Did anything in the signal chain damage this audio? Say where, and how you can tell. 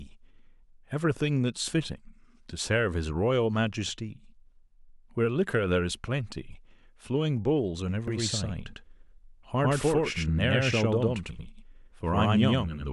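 Yes. A doubled audio track starts abruptly at 8.08 s and runs to the end. From that point the speech is followed by a second, full-band copy roughly as loud as the original, trailing by about a tenth of a second, with no decay or room colour. It sounds like a hard slapback rather than an echo. The likely cause is at the driver or buffer stage: the same signal captured a second time through a slower path and mixed back in.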